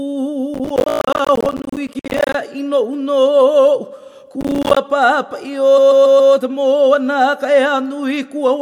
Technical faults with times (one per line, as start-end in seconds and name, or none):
0.54-2.34 processor overload crackle
0.89-0.99 repeated frames
4.41-4.77 processor overload crackle
5.77-6.32 repeated frames